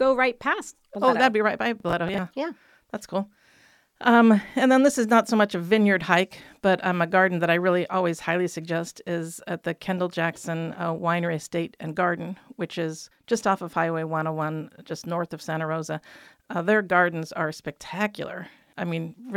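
At 1.80 s, just after "that'd be right by", a burst of processor overload crackle runs until 2.18 s. The processor fell behind and missed several buffer deadlines, about seven, with buffers of around 10 ms. Each missed slot was filled with stale audio rather than silence, and the hard edges at every splice produce a gritty tearing over the speech that stops once the load clears.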